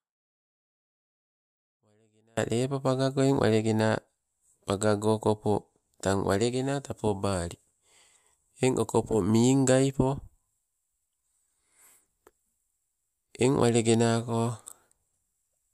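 The speech opens already cut out: from 0 to 2.37 s only a faint trace of sound remains, roughly 40 dB below normal level, before the signal snaps back in abruptly. This audio dropout to a faint residue likely comes from a brief signal break upstream while the path after it stayed live.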